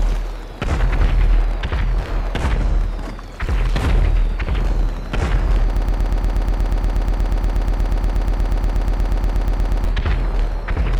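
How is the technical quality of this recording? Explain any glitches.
The recording has one glitch. A broken-record loop runs from 5.77 to 9.85 s: a 120 ms fragment repeats exactly, back to back, 34 times, producing a rapid stutter. Whatever should have played there is missing, likely because the player or stream stalled and kept resending its last buffered piece.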